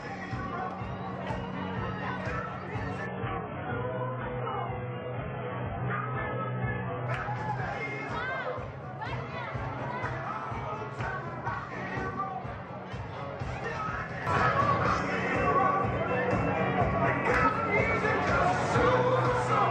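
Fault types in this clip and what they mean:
Adaptive stream at a lower bitrate: from 3.07 to 7.07 s the audio abruptly loses its top end, with nothing above about 3.7 kHz, and turns thin and smeared with coarse coding artefacts before snapping back to full quality, with no gap at either switch. The player fell back to a far leaner rendition of the stream while the connection slowed, and the change sounds like a drop from around 96 kbit/s to near 8 kbit/s AAC.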